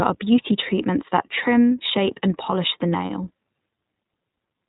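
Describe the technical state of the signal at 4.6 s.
At 4.6 s the speech is still iLBC coded, as throughout. Nothing above 3.8 kHz passes. Plainly audible roughness fits 20 ms frames at 15.2 kbps.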